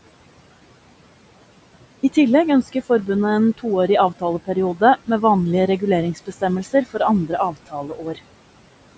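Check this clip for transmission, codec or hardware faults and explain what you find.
Two related problems here, both from the noise suppressor in the call chain, which also band-limits the speech to nothing above 8 kHz.

First, noise suppressor artifacts run through the whole clip. The suppressor pulls the room noise down by about 18 dB, frame by frame. So the background drops away in the gaps and comes back up under the speech.

Second, speech cut by the noise suppressor happens twice. Between 6.15 and 6.42 s, right after "med vanlige", roughly a tenth of a second of speech dips by up to about 17 dB. Then from 7.51 to 8.19 s, something like 400 ms drops by up to about 16 dB. In both spots the suppressor mistook quiet speech for noise, so those bits sound swallowed and faint.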